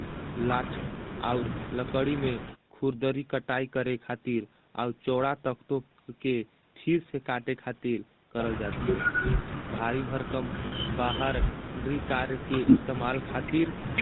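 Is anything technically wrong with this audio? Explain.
Yes. The GSM full-rate codec colours the whole speech clip. It models the vocal tract and excites it with a sparse, regularly spaced pulse train, so voiced sounds come out buzzy and gravelly, with nothing above 4 kHz. The damage is plainly audible and fits the 13 kbps full-rate coder. Unlike plain low-pass band-limiting, it adds that rough, grainy texture.

Lost GSM frames occur from 10.66 to 10.73 s. For about 60 ms, which fits three missing frames, the decoder repeats the last good frame's settings. The sound holds as a brief metallic ring instead of dropping to silence or clicking the way a plain dropout would.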